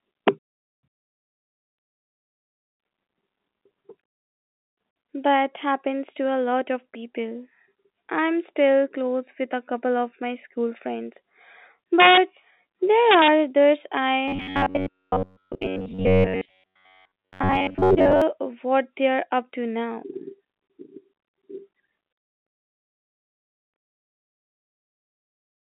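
Telephone-band speech, limited to roughly 200 Hz to 3.7 kHz. Integer overflow produces violent cracks at 0.28 s, 12.00–12.18 s and 13.11–13.28 s, where peaks about 2 to 3 dB over the limit wrap to the opposite sign. From 14.28 to 18.22 s the voice turns into a rigid metallic buzz at 93.8 Hz. This is robotic sound from repeated short buffers: a roughly 10.7 ms block is likely being repeated while most of the real audio is skipped.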